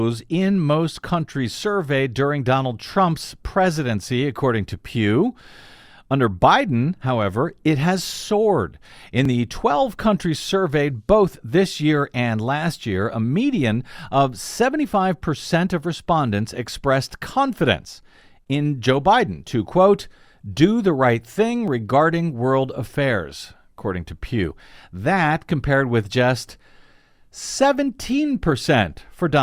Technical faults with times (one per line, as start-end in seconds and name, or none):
9.25 dropped buffer (overrun)
21.68 dropped buffer (overrun)
24.51 dropped buffer (overrun)